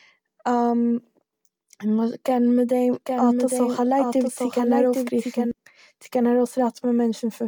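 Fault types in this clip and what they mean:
Doubled audio track: from 2.93 to 5.51 s, a dry, somewhat quieter copy of the speech runs roughly 0.7 s behind, likely captured again by a slower path.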